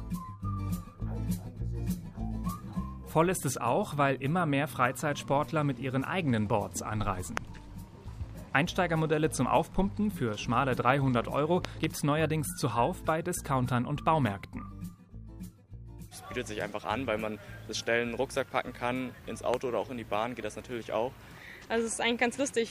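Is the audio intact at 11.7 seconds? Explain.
No. A loud pop occupies 11.65 to 11.86 s. It is two sharp pops in quick succession, well above the surrounding level, roughly 20 dB louder than the signal. The sound carries on underneath them. The likely cause is a sudden voltage step or pulse, from a plug, switch, static discharge or driver glitch, entering the signal path. The later circuitry shapes each pulse into a brief thump-like burst.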